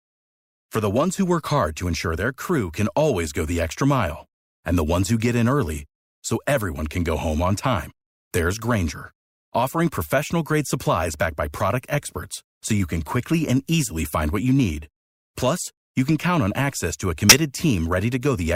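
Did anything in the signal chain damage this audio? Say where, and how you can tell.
Yes. The damage happened at the codec stage, where a corrupt frame was decoded. Bits inside one compressed frame were flipped, and the decoder played that frame instead of rejecting or concealing it. Misread gains or codes put energy at the wrong frequencies for the length of that frame, from 17.29 to 17.36 s, right after "on access to a". The result is a brief burst of about 70 ms that sounds unlike the surrounding speech, at roughly the length of a single codec frame.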